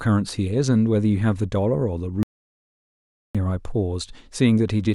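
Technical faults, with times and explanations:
2.23–3.35 s, audio dropout to silence: the speech cuts off mid-flow and the signal drops to silence for about 1.12 s, with no room tone, then returns abruptly. The input was likely lost briefly while recording continued writing zeros.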